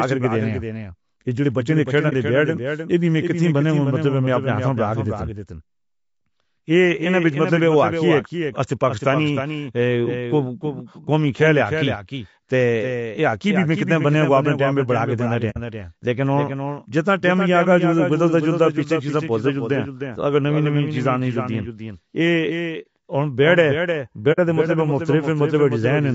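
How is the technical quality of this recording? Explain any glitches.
The recording has clear technical problems: a doubled audio track, coarse codec processing, and four brief dropouts.

A second capture path likely mixes the same speech back in roughly 300 ms late and about 5 dB quieter, producing a dry, abruptly aligned echo.

The low-delay AAC compression uses short frames and a low bitrate, consistent with AAC-ELD near 32 kbps, leaving the speech plainly rough and grainy with a thinned top band.

AAC frame loss with muting occurs at 2.09–2.13 s, between "بچّیاں دے کھیݪݨ" and "دے بیڈ ناں اے", and again at 15.50–15.57 s, 22.82–22.85 s and 24.32–24.39 s. In each case the decoder zeroed the missing frames, so the overlapping windows fade the sound out and in: a brief dip of about 30 ms where one frame was lost, and a soft-edged hole of about 60 ms where two were lost.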